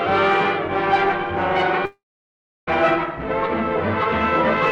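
At 1.85 s the audio stops and the last sound is stretched into a fading buzz. Within a fraction of a second that tail dies away. About 0.67 s of near silence follows. The sound resumes at 2.69 s, but it does not pick up where it left off. Roughly 0.82 s of material is simply gone. This is likely a long network dropout, with the receiver briefly concealing the gap before giving up.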